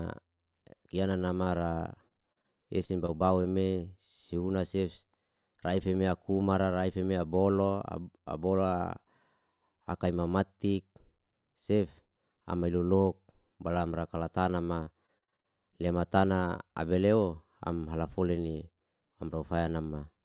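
Short concealed packet loss occurs four times in quick succession: 1.44–1.48 s, 2.08–2.12 s, 2.32–2.38 s and 2.42–2.46 s. Each time, roughly 20 to 40 ms of audio failed to arrive and the decoder filled the hole by extending the preceding sound before easing back into the real signal. Each one is a single, isolated smear or wobble.

Repeated packet loss, heard as robotic sound, follows from 2.86 to 3.46 s. Four gaps, the longest about 24 ms, are patched one after another, leaving about 14% of that stretch synthetic. A heavier run comes right after "ka ma", from 14.64 to 15.46 s. There, eight gaps, the longest about 41 ms, fill about 29% of the span. Unlike the isolated dropouts, these patches pile up faster than the decoder can recover, so the sound turns choppy, with fragments missing throughout.

The whole clip passes through a call path with nothing above 4 kHz, which fits a G.711 A-law codec at 64 kbps.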